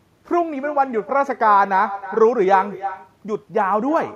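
Echo with no canceller runs throughout the speech. The far end plays the call over a loudspeaker, its microphone picks it up, and nothing removes it, so each phrase returns about a third of a second later, about 15 dB quieter and thinner.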